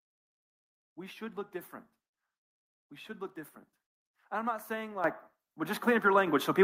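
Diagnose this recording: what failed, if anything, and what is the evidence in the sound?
The microphone volume stepped up twice in call processing: about 10 dB at 5.04 s, then about 4 dB more at 6.27 s. Speech and background rise together, so the call software raised the device's input gain in abrupt single steps.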